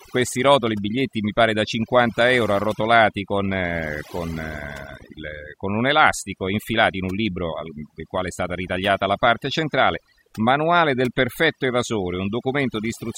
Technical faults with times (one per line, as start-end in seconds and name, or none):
0.00-13.18 overdone noise removal